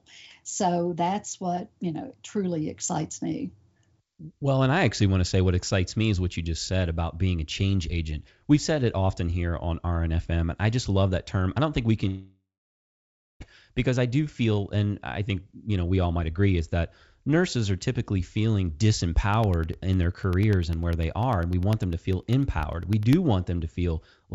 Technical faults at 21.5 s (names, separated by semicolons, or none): periodic USB or driver dropouts